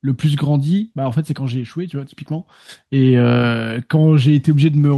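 No technical faults can be heard in this recording.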